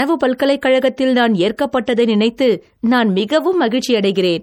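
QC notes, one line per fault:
Throughout, low-bitrate audio saved at a high bitrate: the speech has that smeared, swirly MP3 texture you'd expect from a starved encode, even though the content reaches up to about 20.1 kHz. What you're hearing is likely an earlier MP3 pass at something around 48 kbit/s, later re-encoded at a generous rate like 320 kbit/s. The second pass just wraps up the damage the first one did, so the artefacts stay baked in.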